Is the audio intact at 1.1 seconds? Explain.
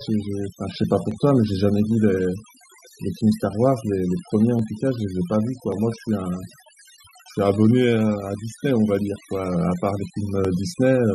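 No. Dropped samples at 1.11 s cause a single sharp click. The sound is likely from a tiny gap in the sample stream, well under a millisecond, so the waveform jumps straight from one value to a later one. That gap is far too brief to erase any audible sound. The discontinuity itself is what you hear, a crisp tick that appears in the spectrum as a thin vertical line.

Overdone noise removal also runs through this moment, as it does across the whole clip. Noise reduction set too aggressively pulls individual frequency bands down or out wherever they sit close to its noise estimate, and softer parts of the speech get cut along with the noise. Around 1.1 s the background drops and breaks up into twinkling, warbling specks.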